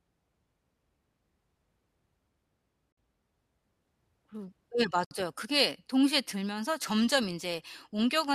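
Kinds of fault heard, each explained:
Gap at a join of encoded pieces, at 2.92 s and 5.05 s: the speech drops into silence for 52 ms and then 64 ms before resuming exactly where it stopped. The audio was encoded in separate pieces and joined without trimming, so each piece's start-up delay and padded final frame remain as dead air. The gaps have edges smeared by the codec.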